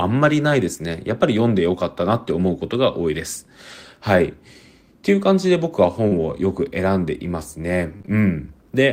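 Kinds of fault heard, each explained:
Lost packet rebuilt from error correction: Single packets of the speech stream went missing, and the decoder filled each one from the low-bitrate backup copy carried in the following packet. That leaves no gap, but the patched audio comes out coarser and noisier. It happens once for 20 ms at 3.71 s, then again for 80 ms from 6.11 to 6.25 s, where four separate packets were rebuilt one after another and the roughness lasts a bit longer.
Short concealed packet loss: About 40 ms of audio failed to arrive in time, starting at 6.07 s and running to 6.13 s. With nothing to decode, the receiver extended the preceding sound, following its pitch if voiced or shaping noise if not, and then faded back into the real signal. The result is a brief smear or wobble, and it leads straight into the error-correction repair that begins at 6.11 s.
Repeated packet loss (robotic sound): Between 7.97 and 8.09 s there are three separate dropouts close together, the longest 26 ms and about 60 ms missing in total. 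Each one is patched by extending the sound just before it, so nearly half of this short stretch is synthetic. With patches that close together the speech turns choppy, and parts of it go missing.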